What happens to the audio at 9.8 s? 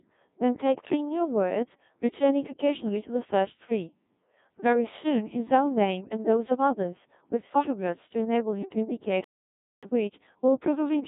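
At 9.83 s a playback stall ends. From 9.24 s the sound stops mid-flow and stays silent for about 0.58 s, most likely because the player ran short of buffered data or its audio thread was held up. On a waveform this is a flat line with abrupt edges at both ends. On a spectrogram it is a blank vertical band cutting straight through the running speech.

From 9.83 s to the end, time-compressed catch-up takes over as the player works off its backlog. Small pieces of audio are dropped and the remainder is cross-faded together, running about 1.1 times normal speed at unchanged pitch. The speech sounds slightly hurried. A spectrogram shows harmonics at their usual spacing, but syllables and pauses are squeezed closer together, and the seams leave small smeared discontinuities.

Across this moment, as throughout, the Codec 2 vocoder at 1.6 kbit/s remains audible. Because the decoder rebuilds speech from pitch, voicing, energy and a coarse spectral envelope rather than from the original waveform, the result is heavily damaged, robotic and buzzy. 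On a spectrogram the harmonics look unnaturally regular and smooth, and nothing appears above 3.7 kHz. The waveform no longer resembles natural speech in shape.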